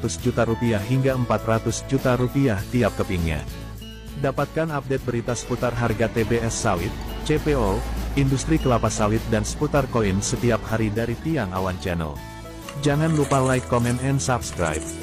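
At 12.59 to 12.65 s, compressed frames are skipped: about three frames of roughly 46 ms go missing, so the audio jumps ahead. Unlike a dropout, the jump leaves no silence.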